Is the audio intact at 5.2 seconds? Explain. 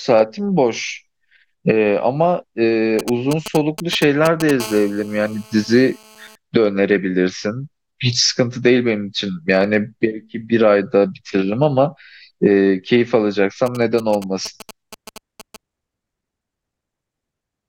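No. From 4.60 to 6.36 s a GSM phone buzz covers the speech. A 2G handset on a call close to the recording chain was sending radio bursts about 217 times a second. The audio circuitry rectified those pulses into the signal path. The result is a harsh, raspy buzz at 217 Hz, dense with harmonics, nearly steady because the phone was on a call, sitting about 20 dB below the speech and unrelated to it.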